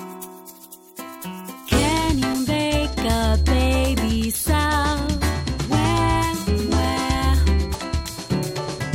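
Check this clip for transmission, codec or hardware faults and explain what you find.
There is one fault: damaged data in a compressed stream, at about 7.73 s. Corrupted bytes in the encoded stream make the decoder misread a frame, lose sync and skip ahead to the next valid frame header. The result is a very short disturbance, lasting about 18 ms.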